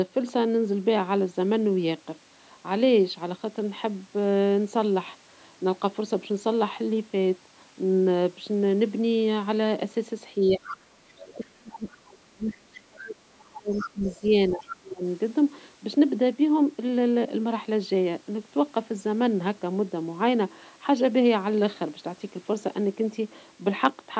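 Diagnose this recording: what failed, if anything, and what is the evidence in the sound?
Speech suppressed in double talk, 10.36 to 10.66 s and 11.06 to 15.03 s, at the call-processing stage. The speech dips by about 15 dB in the first window, then by as much as about 30 dB over roughly three seconds. This is likely the echo canceller failing to separate near talk from loudspeaker echo while both sides spoke, so it attenuated everything.

Other side's voice leaking through at 10.67 to 10.77 s, 11.08 to 11.34 s, 11.71 to 11.89 s, 12.48 to 12.54 s and 13.73 to 14.76 s. These are faint scraps of a second voice, about 10 to 30 dB below the speech, and the last one is a longer stretch. The cause is likely residual far-end echo that the canceller left in the microphone signal. The call's high-pass filtering and the band limit near 8 kHz are normal.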